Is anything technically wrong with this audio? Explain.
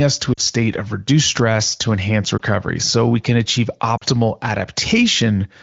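Yes. There are lost AMR speech frames at 0.33–0.41 s, 2.37–2.41 s and 3.98–4.04 s. The lost audio comes to about 40, 20 and 40 ms, which fits one or two dropped 20 ms frames each time. The decoder replays the last good pitch and vocal-tract settings at falling gain, producing a short dip or warble for the single lost frame and a fade to near silence over the two-frame runs. On a waveform this shows as a brief amplitude sag. On a spectrogram it appears as smeared, fading harmonics. Around these gaps the AMR wideband (HD Voice) codec itself shows only light coding texture, consistent with a rate near 16 kbit/s.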